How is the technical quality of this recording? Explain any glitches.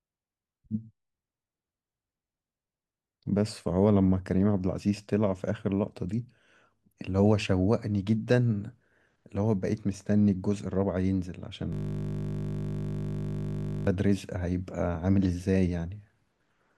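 The recording has one serious glitch, a system hang loop, from 11.73 s to 13.87 s. The computer or driver stalled while the sound hardware kept replaying the same 20 ms stretch of its ring buffer, over a hundred times in a row. The speech stops and a steady buzz at 50 Hz takes its place. On a waveform this shows as identical 20 ms cycles tiled exactly. On a spectrogram it appears as evenly spaced horizontal lines at multiples of 50 Hz, with no movement until the loop breaks at 13.87 s.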